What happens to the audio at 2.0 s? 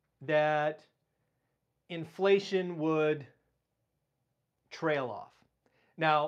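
Nothing goes wrong at 2.0 s; the speech carries on intact through that moment, with no dropout, click or distortion.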